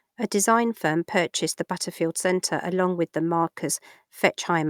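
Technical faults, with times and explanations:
No technical faults, so there are no times or explanations to give.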